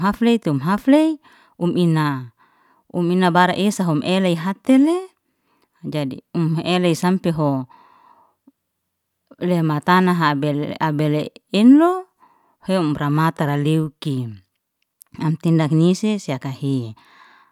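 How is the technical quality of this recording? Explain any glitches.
The recording's signal is technically sound, with no glitches or transmission faults anywhere in the speech.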